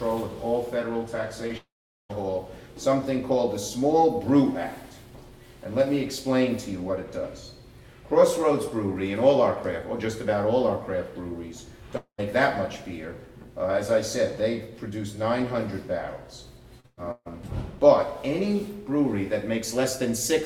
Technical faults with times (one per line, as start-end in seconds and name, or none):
1.47-1.51 short concealed packet loss
1.57-2.11 long network dropout
11.97-12.20 long network dropout
16.80-16.86 short concealed packet loss
16.86-17.28 burst of packet loss